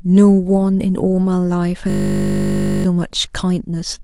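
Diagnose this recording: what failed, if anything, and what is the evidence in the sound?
The driver or buffer stage failed, with a system hang loop from 1.9 to 2.84 s. A single 20 ms slice repeats exactly, giving a steady 50 Hz buzz, because the hardware kept cycling one buffer while the host froze. About a second of sound is lost.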